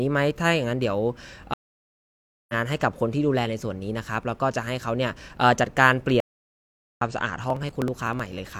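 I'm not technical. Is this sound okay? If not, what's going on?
No, there are two problems. At 1.54 s and 6.20 s there's a stream reconnect: the sound cuts out for about a second the first time and about 0.8 s the second, then jumps ahead, skipping roughly 0.7 s and then 0.5 s of speech. From 7.44 s to 8.51 s, periodic USB or driver dropouts lose a tiny sliver of sound every 0.063 s, causing a steady run of about twenty little ticks.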